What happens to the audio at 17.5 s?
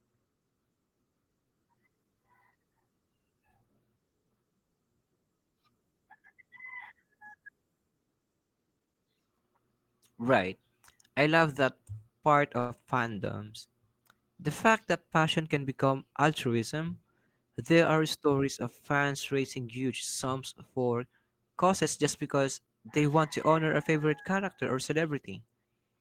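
Nothing goes wrong at 17.5 s; the speech continues cleanly through that point with no dropout, click, distortion or other fault.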